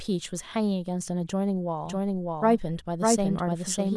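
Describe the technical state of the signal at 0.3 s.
At 0.3 s the speech signal is intact, with no audible fault at that point.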